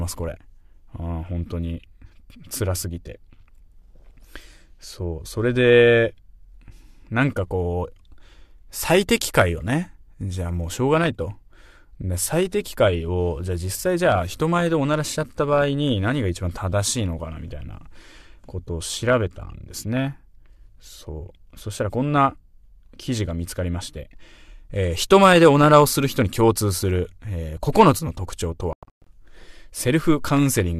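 At 28.73 to 29.07 s there is a digital broadcast dropout. The receiver mutes failed frames, leaving several silent holes (the longest 120 ms) that show as blank gaps in the waveform and spectrogram.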